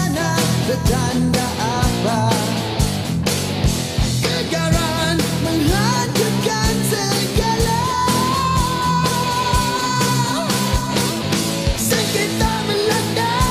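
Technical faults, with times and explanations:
Nothing stood out as wrong on listening to this recording.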